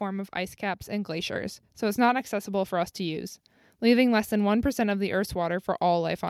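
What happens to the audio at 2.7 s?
At 2.7 s the level is still climbing: automatic gain rising runs from 0.05 to 3.41 s, lifting the whole signal by about 8 dB as the gain control, judging the input too quiet, turns itself up. Voice and background swell together, which separates it from a talker simply moving closer.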